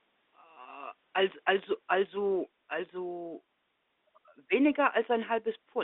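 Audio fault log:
Nothing stood out on listening to this telephone-band speech recording.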